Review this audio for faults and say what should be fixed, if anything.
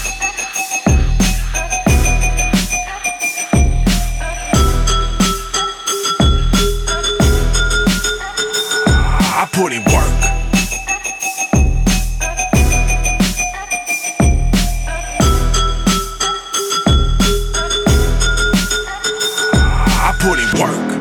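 Nothing here needs fixing: the signal holds steady throughout, with no interruptions, level jumps or added noise to correct.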